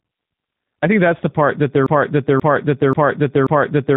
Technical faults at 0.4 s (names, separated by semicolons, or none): G.729 codec